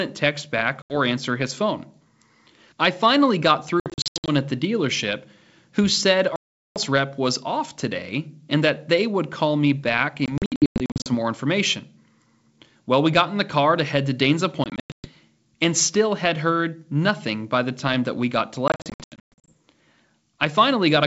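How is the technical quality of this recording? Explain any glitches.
The recording has repeated dropouts. The wideband telephone coding itself sounds clean, with speech reaching up to about 7 kHz.

Packet loss on an ADPCM call occurs six times:
0.82–0.97 s, 80 ms lost between "text back" and "answer his phone".
3.80–4.30 s, after "I finally got" and before "at the dealership who".
6.36–6.78 s, about 400 ms lost.
10.26–11.09 s.
14.64–15.08 s.
18.68–19.53 s, after "that we got to".

Missing packets are filled with silence. The decoder's adaptive predictor and step size then drift out of step with the sender's, so the speech after each hard-edged gap resumes slightly distorted before settling within some tens of milliseconds. On a waveform these appear as flat silent stretches, often in clusters of short holes with runs of up to 400 ms. A spectrogram shows vertical blank bands edged by sharp broadband lines.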